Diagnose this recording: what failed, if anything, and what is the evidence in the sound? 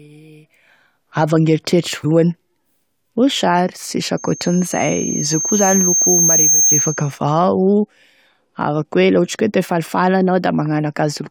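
A brief glitch at 2.03 s is damaged data in the compressed stream: the codec decoder misread corrupted frames and resynchronised on the next header.

From 4.17 to 7.19 s a 6.4 kHz tone swells over about two seconds into a loudspeaker feedback squeal, peaking about 5 dB above the speech, as the microphone-loudspeaker loop exceeds unity gain.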